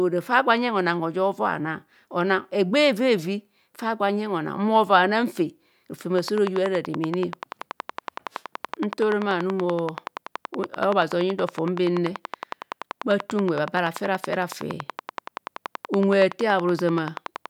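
From 6.19 s to 17.47 s, a train of clicks runs over the speech. Around a hundred sharp ticks arrive at a steady 10.6 per second. They peak roughly 10 dB above the speech and continue through the pauses. Likely cause: electrical interference or a faulty connection or power supply.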